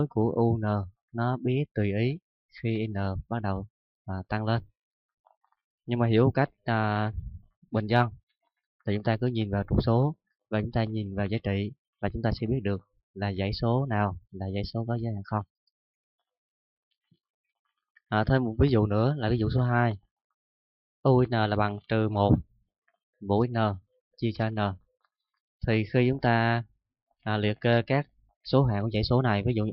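Nothing stood out on listening to this recording.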